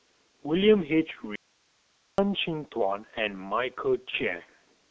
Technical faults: G.723.1 codec; audio dropout to a faint residue; VoIP packet loss concealed by the speech codec

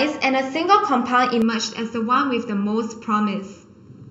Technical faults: channel delay (comb filtering)

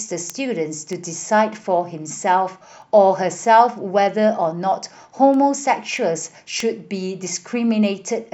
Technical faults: word clock ticks

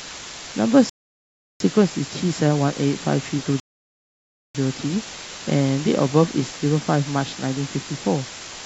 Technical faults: low bit depth with dither; rebuffering stall

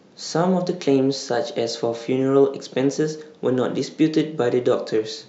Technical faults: none

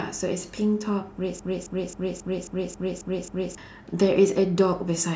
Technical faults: broken-record loop

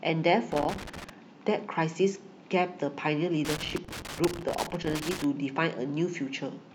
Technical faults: loose connector crackle

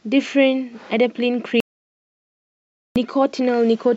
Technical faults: audio dropout to silence

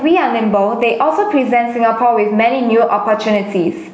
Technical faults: gain pumping

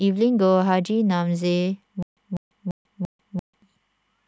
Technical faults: stutter with silent gaps

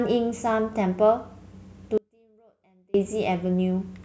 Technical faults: audio dropout to a faint residue

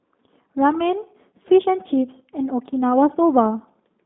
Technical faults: G.729 codec

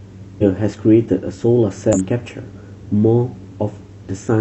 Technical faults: damaged data in a compressed stream

